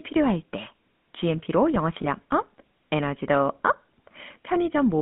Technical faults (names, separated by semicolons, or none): GSM full-rate codec; lost GSM frames